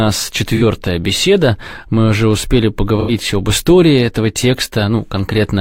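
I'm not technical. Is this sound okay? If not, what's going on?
No, there are two brief glitches. At about 0.56 s, and again from 3.0 to 3.11 s, the sound goes smeared and noisy for a moment. That's AAC frame loss with concealment: chunks of the compressed audio went missing, and the player papered over the gap by reusing what it had just heard. The first gap lasts about 43 ms, which fits one lost frame, and the second about 85 ms, which fits two.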